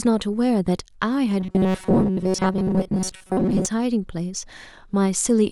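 A speech clip in which, from 1.40 s to 3.66 s, the voice collapses into a rigid, metallic buzz locked at 188 Hz that only loosely tracks the words. This is robotic sound from repeated short buffers, likely caused by audio arriving too seldom, so playback keeps looping its last fragment, here about 5.3 ms long, which fits the 188 Hz pitch. Roughly two-thirds or more of that stretch is repeated material rather than real audio.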